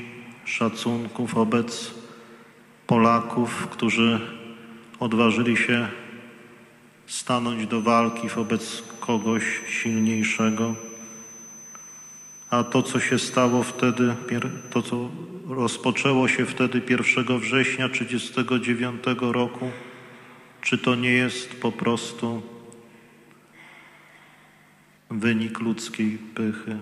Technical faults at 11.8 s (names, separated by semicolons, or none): feedback whistle